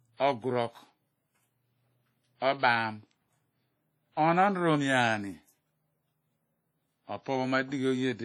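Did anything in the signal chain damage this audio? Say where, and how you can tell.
Yes, at the codec. The speech rings and washes throughout, with breathing hiss from long-block quantisation noise. This is likely WMA compression, fitting roughly 32 kbps.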